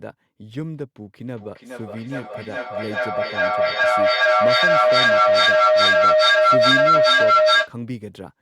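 A speech clip with a feedback howl running from 1.28 to 7.77 s: two devices on the same call share a room, so the mic-to-speaker loop keeps gaining, narrowing to a tone around 700 Hz that pulses roughly every 400 ms and peaks about 14 dB over the speech.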